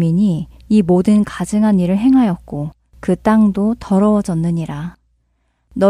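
No technical faults are audible anywhere in the speech recording.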